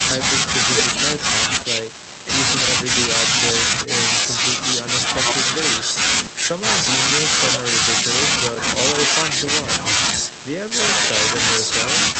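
Nothing's wrong with this speech recording: it's come through a normal call link, so the top end stops at around 8 kHz and there's the coding texture you'd expect, but nothing more than that.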